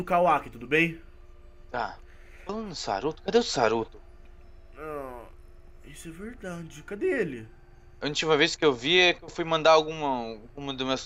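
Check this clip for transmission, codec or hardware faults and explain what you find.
I find no transmission, codec or hardware faults in this clip.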